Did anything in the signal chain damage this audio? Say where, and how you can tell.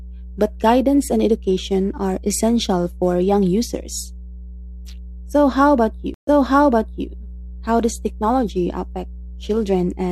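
Yes. Mains hum runs through the whole clip as a steady 60 Hz tone with low harmonics, sitting only around 15 dB below the speech, so it is plainly audible under every pause. The stage is analogue wiring: a ground loop or a nearby transformer has coupled the power-line frequency into the signal before conversion. Because the hum is constant and unaffected by what is said, it cannot come from a codec or processing stage.

A stream reconnect occurs between 6.14 and 7.08 s, in the network and playback stage. The audio drops out for 130 ms, then resumes about 0.81 s earlier than where it stopped, so a stretch of speech is heard twice. This happens when the connection breaks and the player reconnects and starts a fresh decoder in mid-stream. The server then resends a burst from slightly before the break, which makes playback jump backwards.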